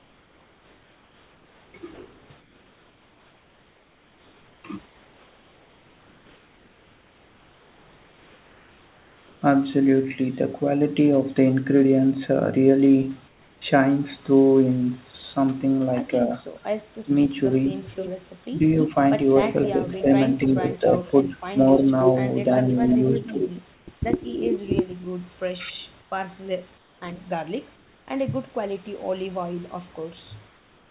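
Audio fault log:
0.00–9.42, 13.28–13.62, 23.74–23.88, 26.02–26.12, 26.78–27.02, 27.76–28.08, 30.48–30.90 s, comfort noise in place of the background: pauses become steady, featureless hiss about 3 to 4 dB quieter, likely from discontinuous transmission; the spectrogram shows smooth, uniform noise bands with no texture.
16.99–17.12, 19.77–21.83, 22.87–23.40, 25.56–25.83 s, speech suppressed in double talk: the voice dips sharply, up to roughly 25 dB, likely because the echo canceller turned down both talkers; the waveform shows brief notched-out gaps.
17.83–18.09, 19.43–19.65, 20.72–21.15, 21.79–23.51 s, echo leak: a fainter copy of the voice returns about 0.29 to 0.31 s late, likely from incomplete loudspeaker echo cancellation; the spectrogram shows repeated, offset harmonic traces.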